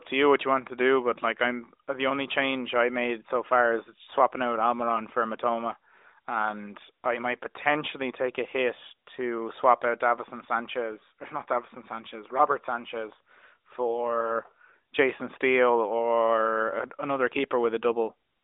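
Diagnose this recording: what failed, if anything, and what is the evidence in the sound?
Nothing in the recording points to a failure at any stage: the speech arrives over a narrowband mobile path consistent with the AMR narrowband mobile codec at 12.2 kbps, with the band running from about 300 Hz to 3.7 kHz, nothing above 3.8 kHz, and only the light coding texture expected at that rate.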